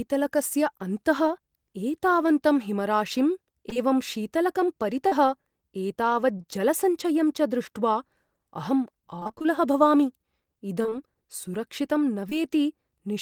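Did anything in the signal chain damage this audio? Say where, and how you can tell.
Yes, the damage comes from the network stage of the call, where packets were lost and the decoder concealed the gaps.

Short concealed packet loss appears as brief smears or wobbles at 3.69–3.73 s and 3.73–3.78 s, straight after "एतावन्तं हिमराशिम्", then at 5.08–5.13 s, 6.37–6.42 s, 6.42–6.45 s and 12.29–12.33 s. Most holes are about 20 ms, which fits 20 ms packets. The one at 5.08 s is about 40 ms. The decoder extended the preceding sound across each gap and then crossfaded back into the real signal.

Repeated packet loss, with its robotic sound, covers 9.19–9.46 s and 10.82–10.93 s. Both stretches turn choppy, with fragments missing. In each, the gaps are no longer than about 24 ms, and concealment fills roughly half the span. The mechanism is the same extrapolation as above, but the next hole arrives before the decoder has recovered, so the synthetic continuations chain together into a robotic texture.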